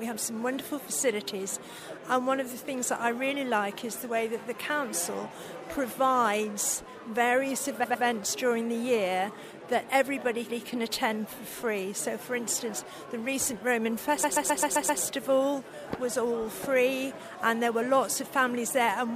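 Repeated frames cause three stutters in this audio. A 104.5 ms block plays two extra times from 7.83 s to 8.04 s. A 156.7 ms block plays once more at 10.49 s. A 130.6 ms block loops six extra times from 14.23 s to 15.01 s. The decoder replays the same compressed frames, so the clip runs about 1.15 s longer.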